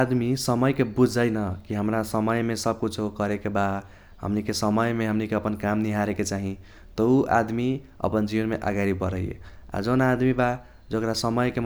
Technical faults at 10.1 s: none

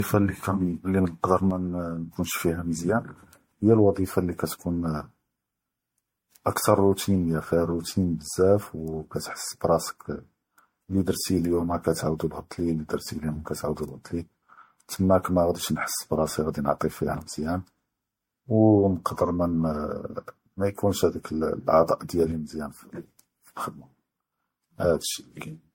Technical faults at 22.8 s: generation loss; one channel drops out

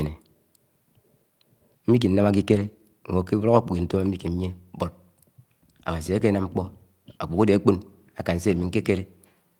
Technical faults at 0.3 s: none

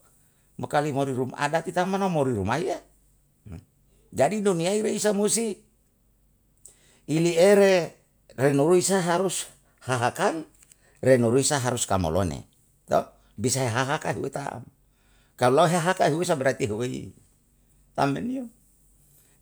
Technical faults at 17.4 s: none

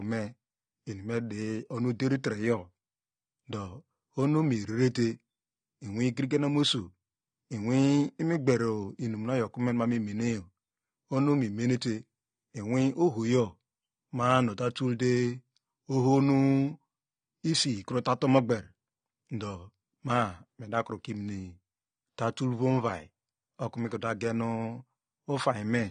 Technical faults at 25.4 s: AAC compression

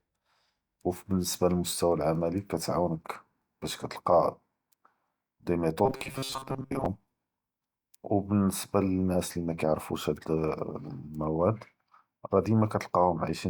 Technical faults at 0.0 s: none

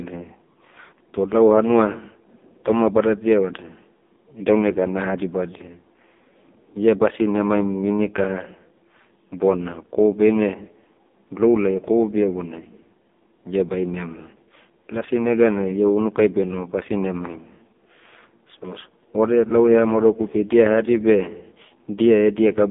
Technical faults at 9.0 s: AMR narrowband mobile codec

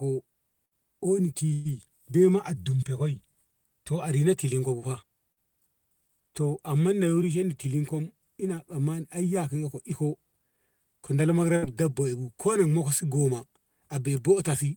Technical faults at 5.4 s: short concealed packet loss

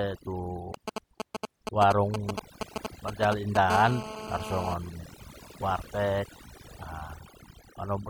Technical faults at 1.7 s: overdone noise removal; GSM signalling bursts

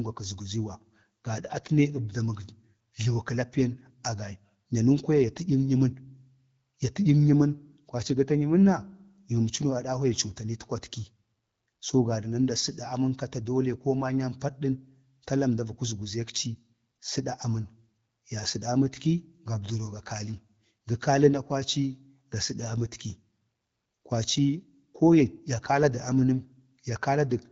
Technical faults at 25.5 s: none

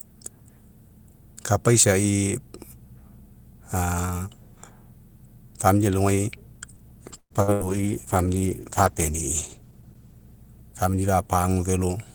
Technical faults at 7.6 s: call bitrate drop; burst of packet loss

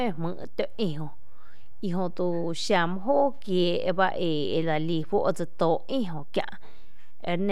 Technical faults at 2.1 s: DC offset

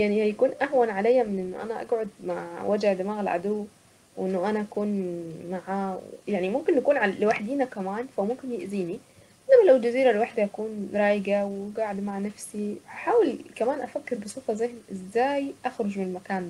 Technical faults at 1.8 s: none

